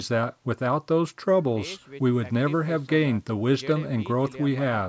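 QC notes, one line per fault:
No faults to note.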